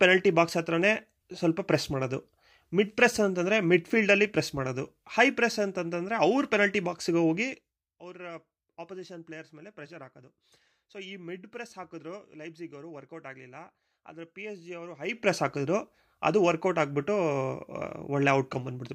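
From 14.98 to 15.33 s, a roughly 20 dB gain change steps unsmoothed about a hundred times a second, causing zipper noise that ticks over the speech.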